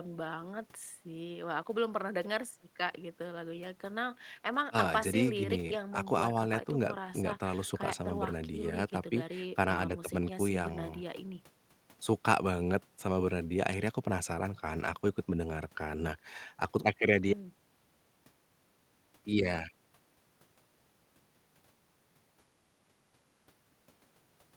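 No technical faults can be heard anywhere in the recording, and the signal keeps a steady, continuous path with nothing breaking into it.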